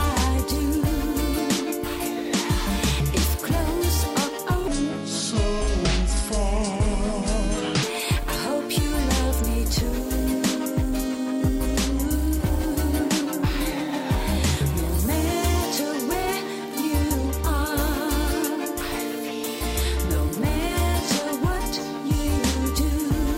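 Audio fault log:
4.68–7.83 s, section at the wrong speed: this stretch plays at 0.70x, dragging and dropping about seven semitones, likely from being run against the wrong clock. On a spectrogram, harmonics shift lower and stretch in time; waveform peaks spread out.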